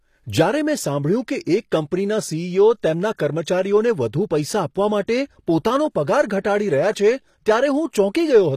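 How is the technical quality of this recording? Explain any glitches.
The recording has plainly audible codec damage across its whole length, plus two brief smeared attacks.

HE-AAC compression, throughout: the treble sounds rebuilt rather than captured, with nothing above 15 kHz. This is likely spectral band replication, which copies lower bands upward under a coarse envelope. Its harmonics misalign with the real ones, so sibilants turn gritty and lispy, which fits a stream around 24 kbps.

Pre-echo, at 5.07 s and from 6.41 to 6.45 s: the codec spreads quantisation noise across each block, so noise meant for a sharp attack leaks into the quiet just before it. A short hiss precedes each onset, about 12 ms at the first and 33 ms at the second, softening both attacks.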